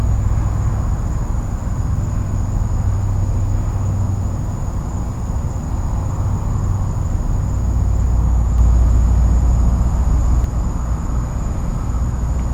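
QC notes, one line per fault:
8.58–10.44 s, doubled audio track: a second full-band copy of the sound trails by roughly 150 ms at about equal level, likely from a second capture path or misaligned edit; unlike an echo or reverb, it has no decay or room colour and switches on and off abruptly.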